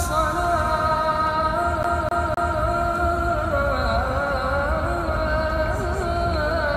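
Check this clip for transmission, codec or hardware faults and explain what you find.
One fault stands out. From 1.83 to 2.60 s, a fast, even stutter replays the same 0.26 s of sound three times, with brief mutes at each jump. It is a CD stuck on one turn: a scratch keeps throwing the laser back one track.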